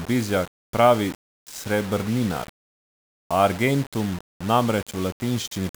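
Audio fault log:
Throughout, low bit depth without dither: the speech carries a grainy, gritty distortion that moves with the sound. Quiet syllables roughen and the softest tails sputter, with the error roughly 20 dB under the signal. This likely comes from plain rounding to about 5 bits with no dither.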